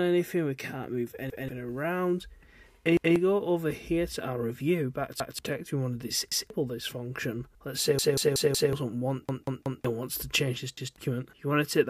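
A repeated buffer stutter appears at 1.3, 2.97, 5.2 and 6.32 s, with longer runs from 7.99 to 8.73 s (four extra plays) and 9.29 to 9.85 s (three), then again at 10.77 s. Each time playback was starved and the device replayed its last 186 ms block, which fits an 8192-sample buffer. The block is heard twice or more with a hard join, dropping up to most of a second of sound. The waveform and spectrogram show identical adjacent blocks separated by vertical edges.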